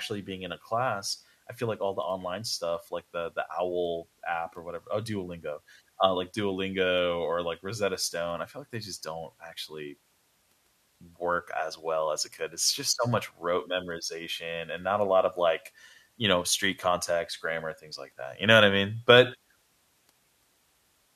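The converter's sampling clock wanders throughout this speech clip, a sample clock jitter fault with timing error on the order of a microsecond, so each sample is taken fractionally early or late. Because the resulting error tracks how steeply the waveform is changing, it shows up as a fine hiss and graininess riding on the speech, sitting roughly 40 dB below the signal, strongest on loud and sibilant sounds and disappearing in the pauses.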